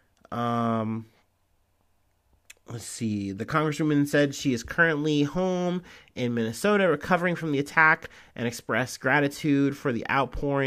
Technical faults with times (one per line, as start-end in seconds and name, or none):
none